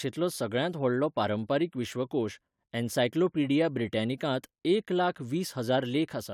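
No technical faults are audible.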